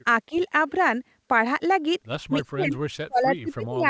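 The speech dips briefly at 0.29–0.35 s, then drops hard, around 30 dB, at 2.52–2.77 s and from 2.99 s to the end: speech suppressed in double talk, likely from an echo canceller turning down this side's talker along with the loudspeaker echo.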